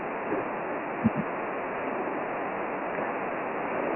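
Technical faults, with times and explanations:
Throughout, Dialogic VOX ADPCM: coarse 4-bit ADPCM coding, fitting a 24 kbps rate, leaves gritty hiss trailing the speech and nothing above 3 kHz.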